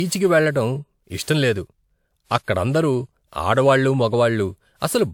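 Speech that has likely been through repeated lossy encoding, with generation loss throughout. The sound points to a WMA chain near 128 kbit/s applied about four times, each pass requantising on a shifted frame grid, so the voice comes across swirly, smeared and hollow, with blurred attacks and nothing above 20.1 kHz.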